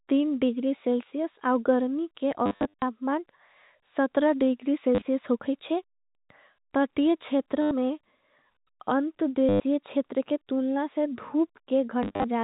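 Packet loss with the last packet repeated breaks up this telephone-band speech at 2.46–2.82 s (after "औँ गर् मी के"), 4.95–5.05 s (before "होगी छे"), 7.62–7.71 s, 9.49–9.6 s (before "छेतर के तुलना से") and 12.03–12.24 s. Each time the receiver replays the last audio it got, and those copies don't line up with the pitch. The replays produce a robotic stutter buzzing near 100 Hz, which fits 10 ms packets. The first event is the longest, scattered runs of up to 60 ms over 360 ms. The G.711 A-law coding behind it shows its 4 kHz ceiling.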